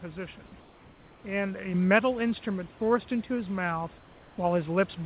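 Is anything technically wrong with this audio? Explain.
Yes, there are three distinct problems here.

Overdone noise removal runs through the whole clip. The suppressor is set far too aggressively for a room whose noise sits about 27 dB under the speech. It kills individual frequency bands whenever they get near its noise estimate, and it takes the softer parts of the voice along with them. The result is a background that drops away and breaks up into little twinkling specks.

From 0.6 to 1.24 s and again from 3.98 to 4.38 s, you get comfort noise in place of the background. The real background drops out and is replaced by a flat, textureless hiss, about 2 dB quieter in the first gap and about 3 dB quieter in the second. That's likely discontinuous transmission: the sender's voice detector heard nothing, stopped sending, and the receiver filled the gap with synthetic noise roughly shaped like the room.

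At 1.74 s the microphone volume is stepped up. Voice and background both jump by about 5 dB at once, a single step rather than a ramp. That's the signature of call software deciding the input was too quiet and raising the device's input gain in one go, so the level shift lands abruptly in the middle of the audio.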